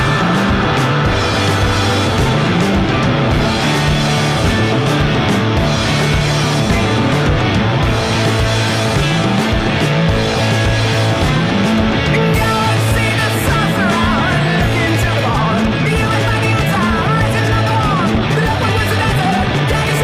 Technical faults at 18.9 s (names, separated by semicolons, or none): time-stretched section